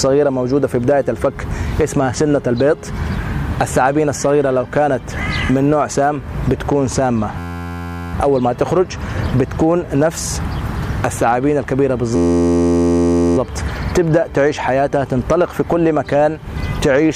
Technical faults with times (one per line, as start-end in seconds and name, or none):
7.38-8.14 system hang loop
12.16-13.37 system hang loop